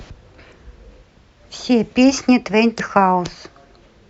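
A speech clip with two brief glitches from damaged data in a compressed stream. Each is a short glitch lasting about 40 ms, at 0.49 to 0.53 s and at 2.76 to 2.80 s. Corrupted bytes made the decoder misread frames there and lose sync.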